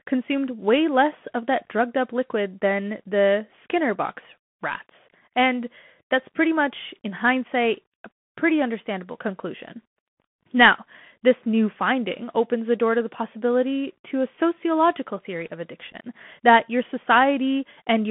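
Throughout the speech, a Bluetooth CVSD headset codec limits the audio to a telephone band of roughly 150 Hz to 3.4 kHz, consistent with a 64 kbps CVSD link. Its one-bit adaptive delta modulation cannot keep up with loud high content, so sibilants sound scratchy over a granular hiss.

At 1.65 s, between "way less of that" and "drugged up liquid than", unconcealed Bluetooth headset packet loss leaves a 15 ms hole, about two packets. A second dropout of about 7.5 ms, roughly one packet, falls between 15.92 and 15.96 s, after "a sociological theory of" and before "that your". Both gaps have abrupt edges.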